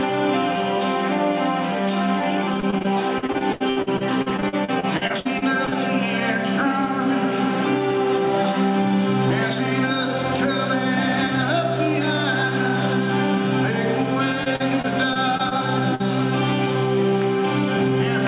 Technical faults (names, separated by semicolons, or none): gain pumping; repeated packet loss (robotic sound); short concealed packet loss